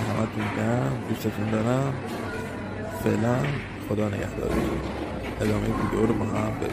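Nothing goes wrong anywhere in this one, so there's no fault to point to at any moment.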